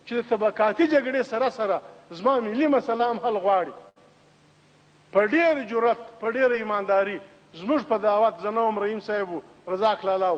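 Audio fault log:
2.97–3.01 s and 6.52–6.55 s, short concealed packet loss: In each place about 20 ms of audio failed to arrive at the decoder in time. The receiver patched the gap by extending the preceding sound, covering about 17 ms at 2.97 s and about 12 ms at 6.52 s, and then crossfaded into the real signal. Because the patch is so short, each one comes across as a brief smear or wobble rather than a clear dropout.
3.89–3.98 s, burst of packet loss: Here about 60 ms went missing in one run, too much to hide with a short patch. The receiver kept extending the last sound for roughly 67 ms and faded it down as it went, so a voiced sound turns into a held buzz and anything else into a fading hiss. Playback then resumes later in the stream, with the lost stretch simply gone.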